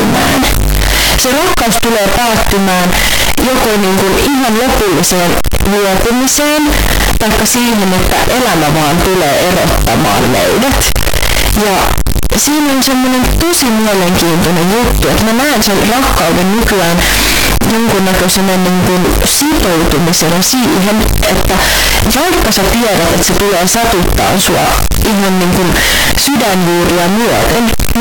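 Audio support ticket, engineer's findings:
Harsh distortion throughout, quiet speech as loud as the rest. Likely signed and unsigned mixed up in 16-bit decode. Waveform full of large jumps at zero crossings; broadband smear on spectrogram.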